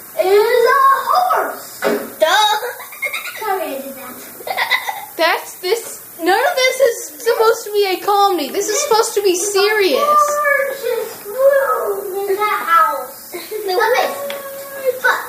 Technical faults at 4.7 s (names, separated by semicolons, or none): low bit depth with noise shaping